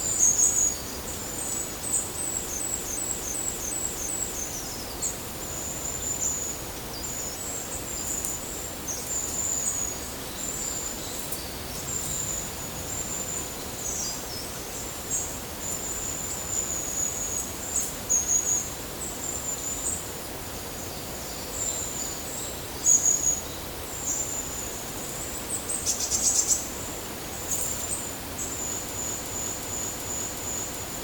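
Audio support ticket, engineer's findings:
System hang loop, 2.60–4.46 s and again 28.98–30.84 s. Same 0.37 s chunk repeats five times at about 2.7 Hz. Driver or host froze while the hardware kept replaying its ring buffer, which fits a 16384-sample buffer at 44.1 kHz.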